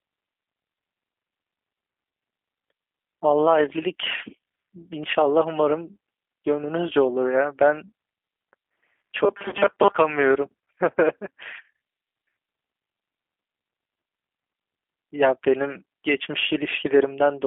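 Throughout the speech, G.729 coding narrows everything to a telephone band of about 250 Hz to 3.4 kHz. The damage is plainly audible as a rough, slightly synthetic texture at 8 kbit/s. Unlike a simple band-limited line, the grain comes from the codec rebuilding each 10 ms frame from a filter, pitch and a few pulses.

From 9.25 to 9.96 s the voice turns into a rigid, metallic buzz near 200 Hz that still loosely follows the speech. The likely cause is robotic sound from repeated short buffers: segments of about 5 ms replayed in place of new audio, with roughly half the real audio skipped. Codec concealment instead fades, but this pitch stays fixed.

Inside that stretch, from 9.49 to 9.55 s, VoIP packet loss concealed by the speech codec adds a brief smeared, buzzy tone that sags in level, pointing to about 30 ms of missing audio, or three frames. It is shorter than the surrounding buzz and decays instead of holding steady.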